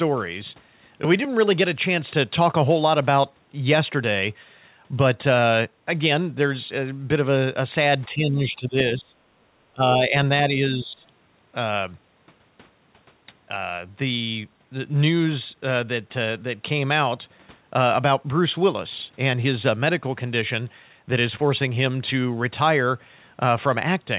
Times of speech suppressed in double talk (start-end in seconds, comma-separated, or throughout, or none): 8.08-9.15, 9.72-10.14, 10.48-11.05